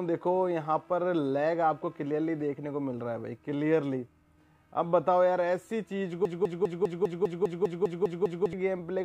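From 6.25 s to 8.53 s a broken-record loop takes over: a 200 ms fragment repeats exactly, back to back, eleven times, likely because the player or stream stalled on its last buffer. It sounds like a rapid stutter, and the waveform shows identical blocks tiling that stretch, with vertical seams every 0.2 s on a spectrogram.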